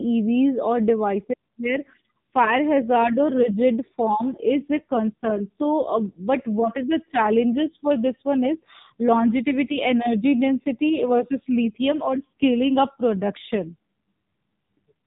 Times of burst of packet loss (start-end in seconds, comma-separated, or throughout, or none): none